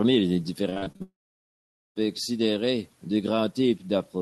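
A speech recording carried over a call link with a band limit near 12 kHz. From 0.69 to 1.02 s there is repeated packet loss, giving a robotic sound. Six short holes appear in quick succession, the longest about 40 ms. Each one is patched by stretching the sound just before it, so about half of this stretch is synthetic fill. The result is choppy, with pieces of the speech missing. At 1.02 s a long network dropout begins and lasts until 1.98 s. The fill first carries on the last sound as a fading buzz or hiss. Then roughly 0.84 s of near silence follows. The most likely cause is that no packets reached the receiver at all during this time. The audio resumes at "considérer deux", but the speech from the lost stretch never returns.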